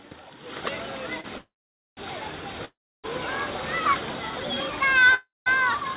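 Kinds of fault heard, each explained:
Short stall from a late packet: One packet arrived late and the jitter buffer ran dry, so the last sound is held about 31 ms near 1.21 s.
Call audio freeze: Packets were likely delayed in transit, emptying the jitter buffer; the sound fades into silence at 1.38, 2.65 and 5.14 s, then resumes unchanged.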